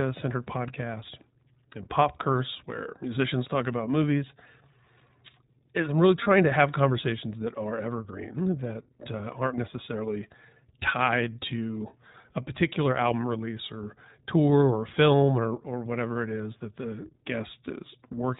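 Throughout, the speech sounds narrowband, rough and slightly synthetic, with nothing above 4 kHz. This is the iLBC codec, and the plainly audible damage fits its 15.2 kbps mode with 20 ms frames. At 6.24 to 6.28 s, between "is I'm really" and "to have conversations that", and again at 8.68 to 8.70 s, just after "conversations that are evergreen", a brief buzzy, held vowel-like sound appears. These are lost iLBC frames: one 20 ms frame each time was replaced by a repeated pitch cycle mixed with noise, and the speech recovers immediately afterwards.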